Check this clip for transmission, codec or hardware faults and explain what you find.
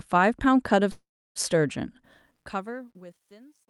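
Two faults are present: a call audio freeze and truncation distortion on the closing fade.

From 0.91 to 1.38 s a call audio freeze holds the last sound as a fading buzz or hiss that sinks into about 320 ms of silence, likely because delayed packets emptied the jitter buffer. The speech then resumes where it stopped, 440 ms later, with nothing missing. A spectrogram shows smeared, frozen bands, then a blank gap.

From 2.04 s, where the fade-out begins around 2 s, truncation distortion appears. The fade keeps about 11 bits with no dither, so the quiet tail becomes stepped and square. From 3.03 s it turns gritty. The waveform shows visible staircase steps.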